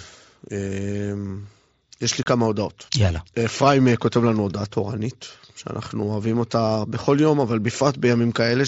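Unconcealed Bluetooth headset packet loss hits this speech recording at 2.23 s: a run of voice packets between headset and phone never arrived, and nothing was synthesised to cover the gap, so silence or an idle pattern was substituted. The result is a hole of about 30 ms, ending at 2.26 s, which fits roughly four lost frames, with hard edges that cut the speech off and restart it abruptly. The surrounding audio carries the band-limited, lightly grainy character of the mSBC wideband headset codec.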